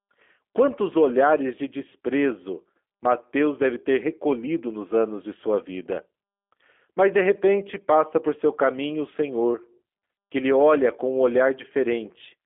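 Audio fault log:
throughout G.729 codec: the speech is resynthesised from a vocal tract filter, a pitch predictor and a few pulses per frame, which fits an 8 kbit/s G.729A link on a 300 Hz to 3.4 kHz line. Nothing survives above 3.6 kHz, so it sounds muffled, with plainly audible synthetic roughness.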